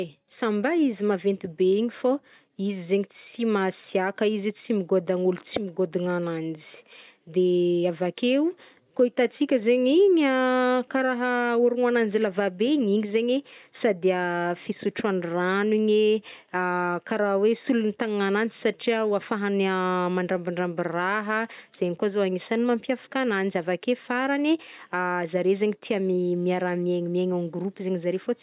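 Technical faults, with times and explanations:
No technical faults can be heard in this speech recording. There is nothing here that needs a time or an explanation.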